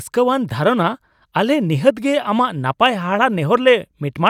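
No technical fault can be heard anywhere in the speech. Nothing in the recording needs to be reported.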